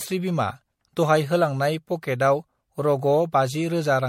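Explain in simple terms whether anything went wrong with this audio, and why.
Something did go wrong, all the way through. The speech sounds swirly, hollow and smeared, with blurred consonant edges and nothing above 16.5 kHz. That's generation loss, likely from saving it as MP3 about four times, each pass adding fresh damage.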